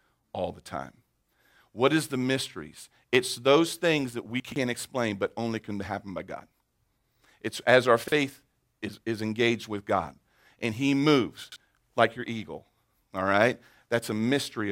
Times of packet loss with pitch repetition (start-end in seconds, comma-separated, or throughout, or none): none